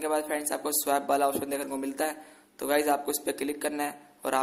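No technical faults are audible.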